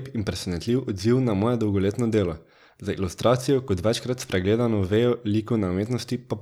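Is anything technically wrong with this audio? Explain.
No, nothing technically wrong can be heard here.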